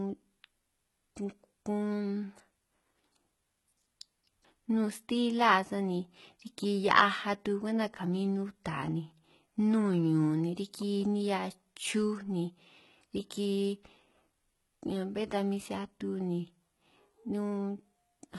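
From start to finish the treble sounds gritty and metallic, the s sounds turn lispy, and nothing reaches above about 11.8 kHz. This is likely heavy HE-AAC compression, with the upper spectrum rebuilt by copying lower bands upward, which fits a bitrate around 16 kbps.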